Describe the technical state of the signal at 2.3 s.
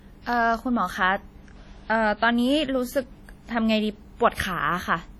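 At 2.3 s the speech carries heavy WMA compression damage, present throughout. Long transform blocks smear ringing, washy noise that breathes with the voice, likely from a bitrate near 32 kbps.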